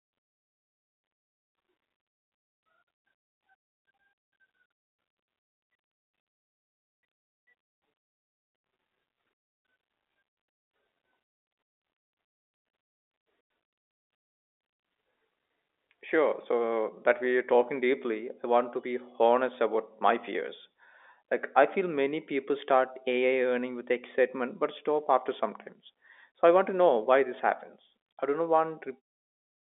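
No faults can be heard anywhere in this speech clip.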